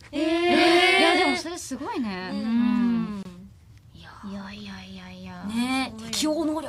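At 3.23 s a 25 ms gap at a join of encoded pieces cuts the sound: untrimmed encoder delay and padding leave a brief dropout, seen as a blank vertical stripe with slightly smeared edges.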